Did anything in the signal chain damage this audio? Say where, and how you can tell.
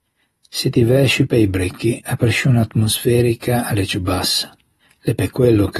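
Yes. The damage points to the codec stage, most likely AAC compression (AAC-LC) at a low rate that fits roughly 32 kbps, and it runs through the whole clip. Nothing is present above 12.5 kHz. The encoder quantises each frame's frequency lines against a hearing model, and at this rate it keeps too few bits for the top band and discards it. The speech is audibly dulled and smeared throughout.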